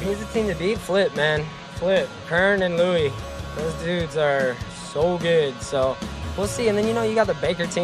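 No dropouts, clicks, distortion or level jumps can be heard anywhere in the clip, so there is nothing to flag.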